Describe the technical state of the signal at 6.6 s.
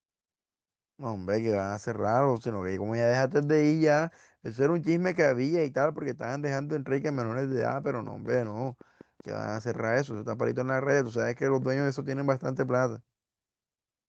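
At 6.57 to 6.63 s there is a lost packet rebuilt from error correction. About 40 ms, likely two packets, went missing. The decoder played low-bitrate copies carried in the following packets. There is no gap, but that stretch sounds briefly rougher and noisier.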